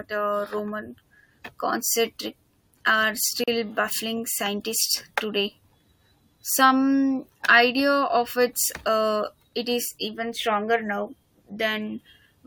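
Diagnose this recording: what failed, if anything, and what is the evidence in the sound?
A short hole opens in the continuous speech at 3.44 s and closes at 3.48 s, a silence of about 39 ms with smeared edges, after which the sound resumes exactly where it broke off. This is a gap at a join of encoded pieces, a codec-stage fault: the audio was encoded in separate sections and concatenated untrimmed, so the encoder's start-up delay and the padding of the previous section's last frame both remain as dead air.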